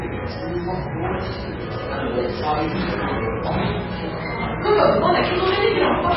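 From start to finish the audio sits under a hard ceiling at about 5.5 kHz, with nothing above it, and the damage is heavy: a watery, swirling texture hangs over everything, and attacks come out smeared rather than crisp. That pattern points to MP3 compression at a very low rate, likely something around 16 kbps, where the encoder chops off the treble and lets weak frequency lines flicker in and out between frames.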